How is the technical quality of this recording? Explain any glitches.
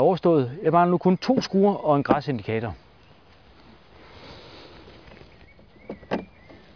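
No glitches can be heard in this recording. There is nothing here that needs explaining.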